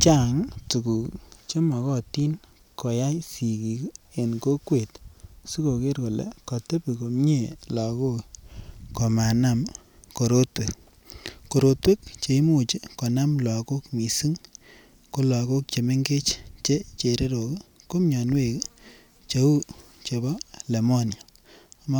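No technical faults can be heard anywhere in the recording; the signal stays steady and intact throughout.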